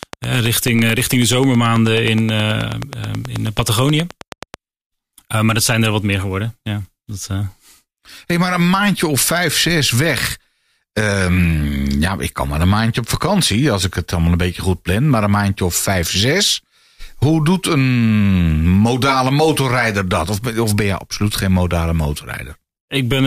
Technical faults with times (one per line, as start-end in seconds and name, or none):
0.03-4.55 train of clicks